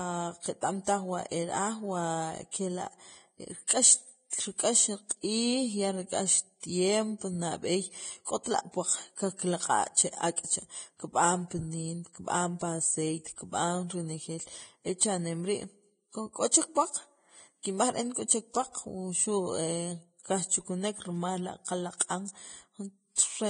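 Heavy Vorbis compression across the whole speech, likely at a low bitrate near 23 kbps. Nothing sounds above 9.7 kHz. Treble turns hissy and grainy, with blurred attacks.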